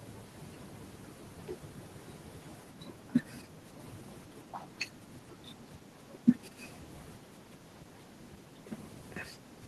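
Speech recording with no audible technical faults.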